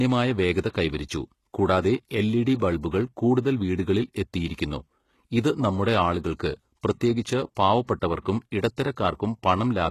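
Speech with plainly audible HE-AAC compression throughout, likely from a very low bitrate around 16 kbps: the sibilants sound gritty and lispy because the treble is rebuilt from copied lower bands. A spectrogram would show repetitive, smeared high bands that stop at 12.3 kHz.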